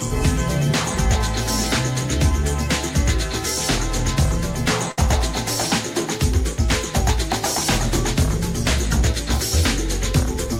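A packet arrived late at about 4.91 s, and the receiver's jitter buffer ran dry, producing a short stall from a late packet. Rather than skip ahead, the receiver held the last sound for 62 ms, stretching it across the gap until the packet turned up, then resumed exactly where it left off. The result, through roughly 4.91 to 5.00 s, is a brief drawn-out smear with a faint buzz or dip. Nothing is lost, but everything after runs 62 ms later.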